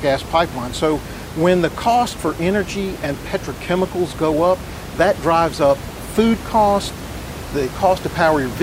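No system faults on the speech; the only background is the room's own noise, sitting about 13 dB below the speaker.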